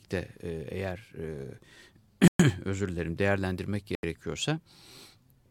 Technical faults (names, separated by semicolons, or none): Bluetooth stall